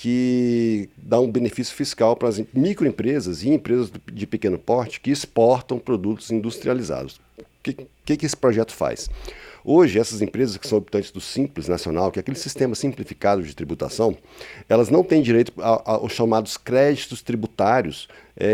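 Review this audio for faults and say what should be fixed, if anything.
Nothing to fix; no faults found on review.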